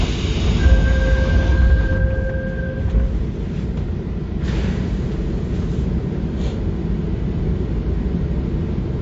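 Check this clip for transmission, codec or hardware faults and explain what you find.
One codec fault runs through the whole clip. The sound has plainly audible damage of the kind that MP3 compression likely causes. Nothing is present above 7.5 kHz. The top end stops dead there. Weak frequency lines drop in and out from frame to frame. That gives a watery, swirling texture, and sharp attacks smear. The encoder was short of bits. It cut the treble and zeroed quiet detail. The damage level fits a low bitrate of around 48 kbps.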